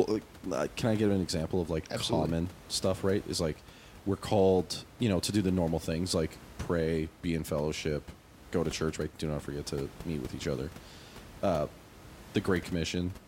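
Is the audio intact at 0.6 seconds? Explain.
Yes, the speech is intact at 0.6 seconds, with only the room's own background noise sitting about 20 dB below it.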